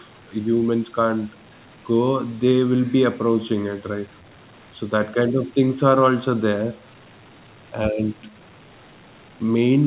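No technical faults are audible.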